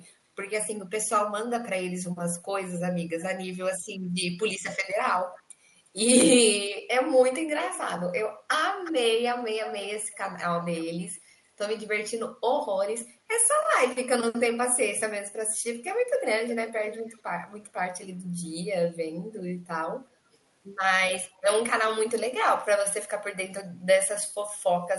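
Speech with an echo leak at 5.35–5.89, 7.62–7.81, 8.84–8.92, 9.65–11.2, 16.48–17.68, 20.33–20.37 and 21.35–21.41 s. A delayed copy of the voice returns about 355 to 372 ms late, ranging from barely audible to fairly prominent. The likely cause is a far-end loudspeaker whose echo canceller let its microphone pickup through. On a spectrogram, faint duplicate harmonic traces trail the originals, and the waveform shows low-level repeats.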